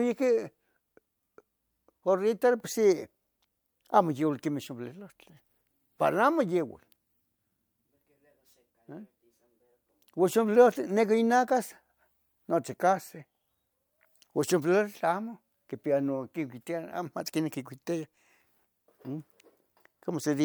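No technical faults are audible.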